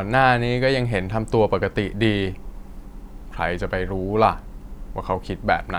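Listening closely to the speech, nothing stood out as a technical fault at any point.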